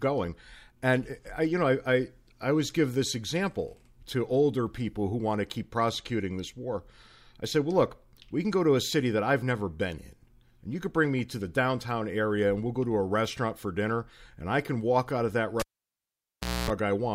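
At 15.60 s, right after "walk out of that", a pop drops the speech into near silence for about 1.05 s, broken by a 0.25 s burst of 60 Hz mains buzz, and a second pop at 16.70 s: a cable pulled and plugged in while live.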